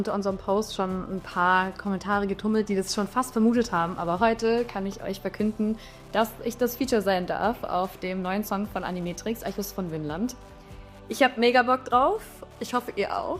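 Wi-Fi interference ticks faintly through the whole audio every 102.4 ms, a nearby radio's beacon rectified by the circuit. GSM buzz would chatter at 217 Hz instead.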